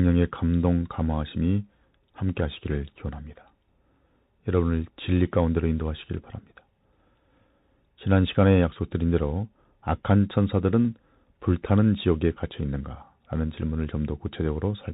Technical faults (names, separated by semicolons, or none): Bluetooth CVSD headset codec